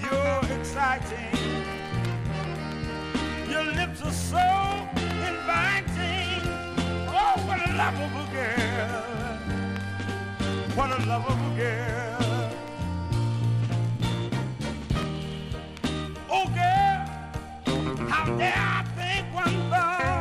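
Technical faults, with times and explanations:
No technical faults can be heard anywhere in this clip. Nothing in the sound calls for a time or an explanation.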